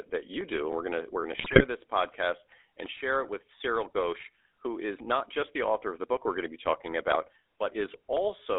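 Throughout, the speech sounds buzzy and gravelly, confined to roughly 300 Hz to 3.6 kHz. This is the GSM full-rate codec, which fits 13 kbps coding that rebuilds the voice from pulse-driven vocal-tract filtering.

From 1.38 to 1.64 s, between "gonna we're gonna" and "this podcast and share", the voice breaks into squawks, pops and gargling. GSM bit errors corrupted the decoder's filter, pitch or gain values across successive frames.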